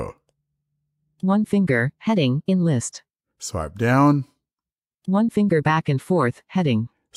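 From 2.04 to 2.63 s the speech runs 6% fast and rises 101 cents, about a semitone, then snaps back: a drift correction step, likely clock-matching software changing its playback rate in one step to refill or drain its buffer. Unlike wow, the shift is abrupt and steady, not wavering.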